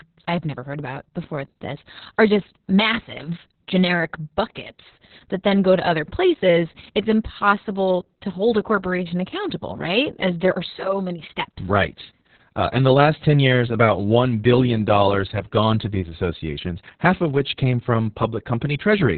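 From start to finish the speech carries heavy Opus voice compression. The codec has fallen back to its SILK linear-prediction coder in narrowband mode, so nothing survives above about 4.3 kHz, and the excitation is coded so coarsely that the voice turns muffled, hoarse and faintly robotic. That degree of damage points to a bitrate around 6 kbps with long 60 ms frames. A spectrogram shows a flat ceiling near 4.3 kHz with smeared, blocky harmonics below it.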